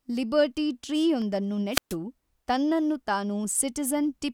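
Spoken audio with two separate faults. From 1.09 to 1.61 s, five CD scratch ticks arrive at a steady rate of about eight per second, each well under a millisecond, marking one surface flaw met once per disc rotation. From 1.71 to 1.96 s comes a wireless microphone squelch dropout: the receiver mutes for about 130 ms as the FM signal fades, leaving a single silent hole rather than repeating clicks.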